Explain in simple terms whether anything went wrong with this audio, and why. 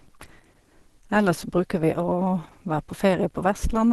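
Something did go wrong, across the whole clip. The speech sounds muffled and hoarse, with a grainy roughness. That points to Opus compression, likely squeezed hard. At such low quality, Opus switches to a speech-oriented mode and trims the highest frequencies.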